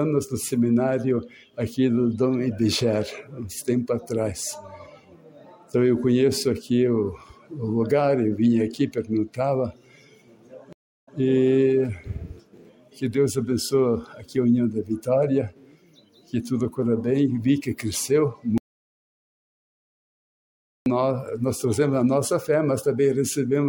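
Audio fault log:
10.73–11.17 s, stream reconnect: the connection dropped and the player fell silent for about 343 ms, then rejoined with a fresh decoder. Playback resumes roughly 104 ms earlier than where it broke off, so a short stretch repeats, and the first frame comes back faded in.
18.58–20.86 s, audio dropout to silence: the sound cuts out mid-flow and about 2.28 s is silence, with no room tone underneath. That content is simply gone. The likely cause is lost input, such as a disconnected device or failed link, while recording continued.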